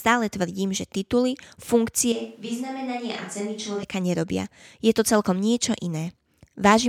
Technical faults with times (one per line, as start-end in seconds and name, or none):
2.12-3.83 switch to a distant microphone